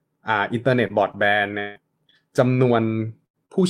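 Repeated packet loss (robotic sound) runs from 0.87 to 2.14 s. Four separate gaps, about 220 ms in total and the longest 163 ms, were patched by stretching the preceding speech. Roughly 70 ms was rebuilt, leaving the voice choppy and mechanical, with fragments dropped out.

A burst of packet loss follows at 3.26 to 3.37 s. About 80 ms of consecutive audio failed to arrive in time, so the receiver held and faded the last sound across the hole before speech resumed further on, with that stretch missing.

Short concealed packet loss appears at 3.46 to 3.52 s. Roughly 40 ms went missing and was bridged by extending the prior sound, then cross-faded back into the real signal. It is heard as a brief smear or wobble in the speech.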